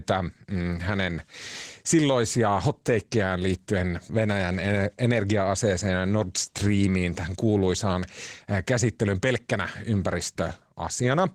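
Throughout, the speech sounds hoarse and slightly robotic. This is Opus voice compression in hybrid mode, coding coarsely at a rate that fits about 16 kbps.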